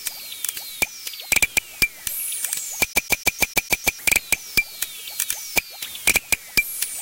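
From 2.93 s to 3.99 s the playback gets caught in a CD stuck on one turn fault. A defect on the disc surface knocks the laser back one track at the same point of each rotation, so a 0.15 s slice of the sound is replayed seven times in a row. Each jump back leaves a brief dropout, producing a rapid, evenly spaced stutter before playback moves on.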